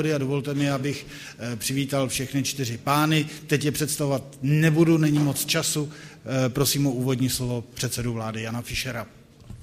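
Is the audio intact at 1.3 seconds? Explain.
Yes, at 1.3 seconds the audio plays through cleanly, with no dropout, click, distortion or other fault to be heard at that moment.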